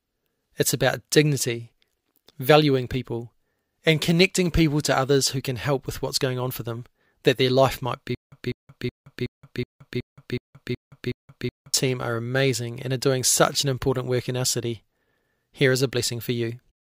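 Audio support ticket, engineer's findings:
Stutter with silent gaps, 8.15–11.74 s, after "their life might be", before "are amazing and are". A 200 ms burst repeats 9 times, with 171 ms of digital silence between and a 371 ms period. Likely a stalled stream replaying its last buffer. The real audio is lost.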